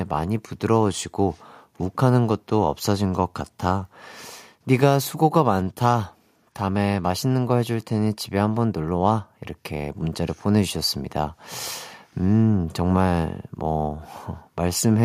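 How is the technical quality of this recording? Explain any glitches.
The speech recording's signal holds steady throughout, with nothing in it that could be called a technical glitch.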